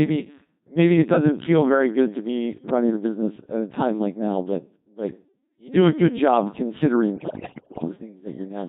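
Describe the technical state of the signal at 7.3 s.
At 7.3 s you're inside a burst of bit errors on digital voice radio, running from about 7.16 to 7.88 s. With something like a fifth of the bits flipped, each damaged frame gets the wrong pitch, level and spectral shape, so the speech lurches into warbles, bleeps and robotic gibberish.

Underneath that, the whole clip is going through the Codec 2 vocoder, heavily, in a way that fits its 2.4 kbit/s mode. Since only pitch, voicing, energy and an envelope get sent and the voice is rebuilt from sine waves, everything sounds buzzy and synthetic.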